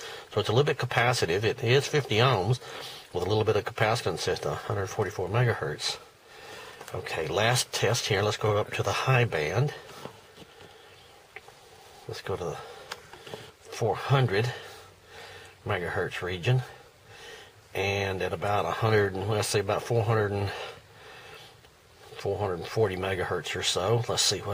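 No technical faults are audible.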